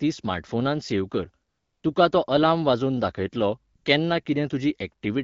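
At 1.49 to 1.83 s, after "ती स्मार्टफोनांत सेव कर", then 3.73 to 3.85 s and 4.23 to 4.25 s, AMR comfort noise appears: the phone stopped sending speech frames and the receiver substituted steady synthetic noise, which switches in abruptly over the light AMR-WB (HD Voice) coding at 12.65 kbit/s.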